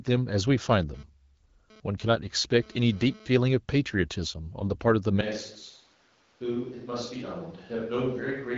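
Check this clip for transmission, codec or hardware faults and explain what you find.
Two faults stand out in this speech clip: an intermittent radio-interference buzz early on, and a change of microphone that persists to the end.

GSM phone buzz, 0.70 s to 3.27 s. A 2G phone close to the recording chain was transmitting in bursts, and some stage of the audio circuitry rectified those radio pulses into the signal. The result is a harsh, raspy tone at about 217 Hz, dense with harmonics and unrelated to the speech, sitting about 28 dB below it. It stutters on and off rather than holding steady, the pattern of a phone exchanging data rather than carrying a call.

Switch to a distant microphone, from 5.21 s to the end. The sound abruptly becomes hollow and roomy, with thinner bass and a level roughly 10 dB lower, while background room noise rises to around 30 dB below the speech. This most likely means the close microphone's feed dropped out or was omitted and a farther microphone, such as a camera's, took over. 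Because the change is sudden and never reverses, the remaining few seconds keep that distant, reverberant character.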